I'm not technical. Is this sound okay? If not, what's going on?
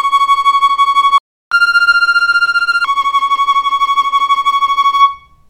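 No. At 1.18 s there is a playback stall: the player likely ran out of data or was held up, so the sound cuts out completely for about a third of a second (332 ms) before coming back at 1.52 s.

From 1.52 s to 2.85 s there is catch-up at higher speed. To recover the lost time, the player runs through what it missed 1.25 times faster, so the sound hurries and rises about four semitones in pitch before settling back to normal.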